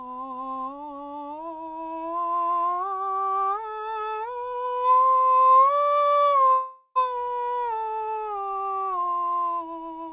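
At 6.53 s the music breaks off. A buzzy continuation of the last sound takes its place and fades over about 0.42 s. A very brief silence follows before the music returns at 6.98 s. This is likely a long network dropout. The receiver had nothing new to play, so it stretched the final fragment to cover the gap. The music picks up further on, and the missing stretch never plays. The whole clip keeps the narrow call band, with nothing above 4 kHz.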